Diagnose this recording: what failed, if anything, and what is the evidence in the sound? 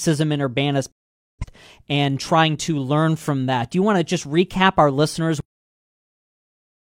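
Speech snaps to silence at 0.91 s with a 3 ms fade and returns at 1.45 s. This is a digital broadcast dropout: the receiver muted failed frames, fitting about eleven lost.

At 5.41 s the sound stops mid-utterance into digital silence with no decay. This is a cut-off end: the final playback buffers were never written.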